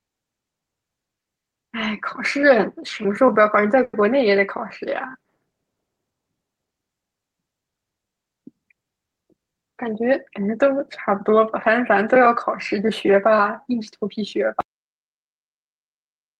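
At 3.83 to 3.95 s there is a call audio freeze. The last sound is stretched into a fading buzz or hiss for about 100 ms, then about 20 ms of silence, likely from a packet delay. Unlike a dropout, the speech resumes where it stopped with nothing lost.

From 9.00 to 10.38 s, a jitter buffer speed-up removes short pitch-period pieces repeatedly. Speech runs at 107% speed, losing about a tenth of a second, with pitch unchanged rather than raised.

At 14.61 s, an audio dropout to silence cuts the speech off mid-flow through to the end, likely from lost input. The gap is silent without room tone or fading tail.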